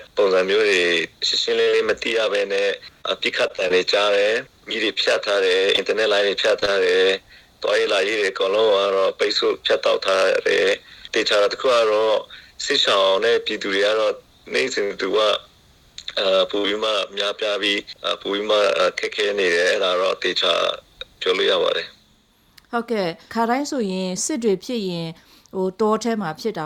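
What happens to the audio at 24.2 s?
Nothing goes wrong at 24.2 s; the audio plays through that moment intact, with no dropout, click, distortion or other fault.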